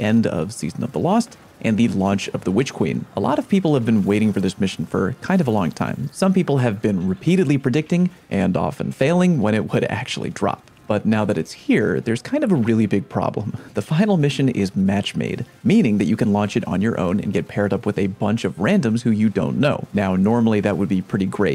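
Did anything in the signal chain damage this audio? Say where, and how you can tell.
No, nothing audible points to damage at any stage of the chain, from capture through to playback.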